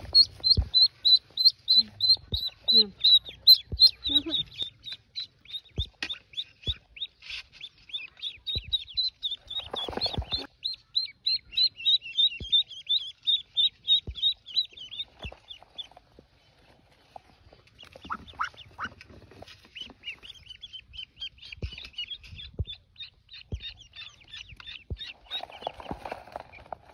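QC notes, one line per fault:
1.47 s and 3.48 to 3.86 s, hard clipping: peaks overran the stage's limit, by about 1 dB in a brief tick at 1.47 s and about 4 dB over the longer stretch, and were sliced flat. Unlike rounded soft clipping, those square tops produce sharp high harmonics, heard as crackle and harsh fuzz.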